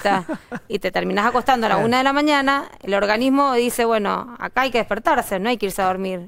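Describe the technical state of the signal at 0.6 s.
At 0.6 s the signal is intact, with no audible technical fault at that point.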